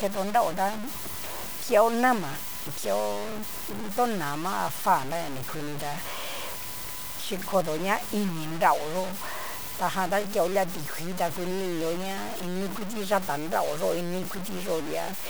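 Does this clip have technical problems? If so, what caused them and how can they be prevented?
Yes. Low bit depth without dither runs throughout: the speech sounds grainy and gritty, with error roughly 10 dB below the signal, likely from truncating to about 5 bits. Prevent it by keeping a higher bit depth and applying dither before any reduction.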